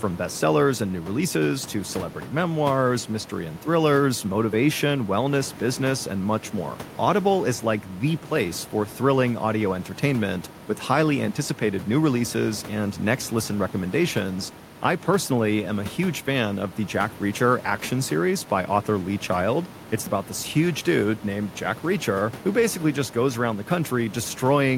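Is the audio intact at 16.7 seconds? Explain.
Yes, at 16.7 seconds the speech is intact, with only the room's own background noise sitting about 19 dB below the voice as part of the recording.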